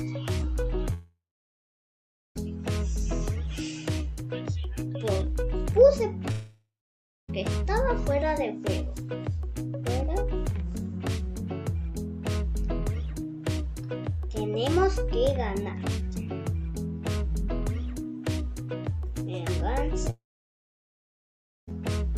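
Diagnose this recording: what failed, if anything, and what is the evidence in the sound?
The network stage likely failed: three long network dropouts, at 0.93–2.37 s, 6.31–7.30 s and 20.10–21.69 s. Each fades to silence, then resumes with audio lost.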